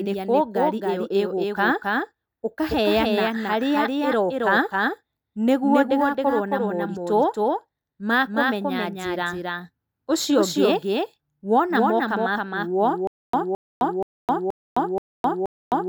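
Throughout this speech recording a doubled audio track runs under the main signal. A second full-band copy trails by around 300 ms at roughly 5 dB lower. It is most likely a duplicate capture through a slower path or two out-of-step copies in an edit. Unlike a room echo or reverb, the copy has no decay or colouration and never fades into a tail. It is simply the same sound again, clean, at a fixed offset. From 13.07 s to the end, the audio breaks into a stutter with silent gaps. A 216 ms fragment repeats six times, each followed by 261 ms of digital silence, giving an even 477 ms cycle. The likely cause is a stalled player or stream that replays its last fragment on each retry and then runs dry. What separates this from ordinary dropouts is that the same burst returns identically at a steady rhythm, while the audio that should have filled those seconds is lost.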